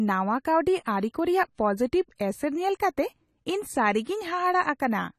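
Throughout, the speech sounds dull and smeared, with nothing above 14 kHz, which points to likely AAC compression at a low bitrate, around 32 kbps.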